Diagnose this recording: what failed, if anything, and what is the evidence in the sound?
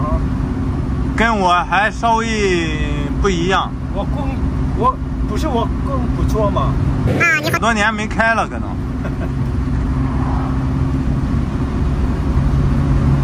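A sample-format conversion fault: from 7.08 to 7.58 s the audio was read two samples at a time (double speed), pairing samples as if stereo or wider words. That half-second runs twice as fast and jumps an octave (12 semitones) higher.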